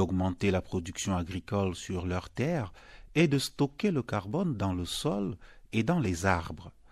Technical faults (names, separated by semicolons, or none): dropped samples